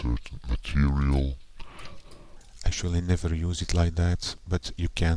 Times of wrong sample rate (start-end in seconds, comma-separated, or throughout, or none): 0.00-2.37